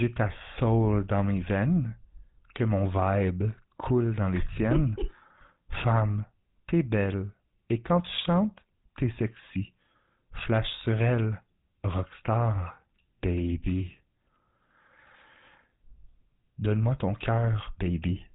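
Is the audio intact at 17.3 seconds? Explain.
No. At 17.3 seconds, as everywhere else in this speech, the audio carries GSM full-rate codec damage, plainly audible. The codec models the vocal tract as a filter and drives it with a coarse, regularly spaced pulse excitation, which fits a 13 kbps GSM full-rate stream. The result is a buzzy, gravelly roughness on the voice. Nothing above 3.8 kHz passes, so sibilants and upper harmonics are missing and the sound is dull and band-limited.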